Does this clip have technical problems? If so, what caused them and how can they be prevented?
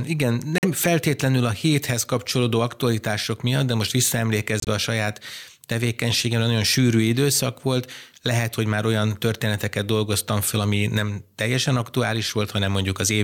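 Yes. Corrupt frame muted: flipped bits made the decoder reject short runs of compressed frames, and the player substituted silence. Sound drops abruptly to nothing for about 80 ms at 0.58 s and 4.60 s, before "feltétlenül a héthez kapcsolódó" and "a saját tevékenységem nagyon" resume on time. Error-checked transport or forward error correction prevents this.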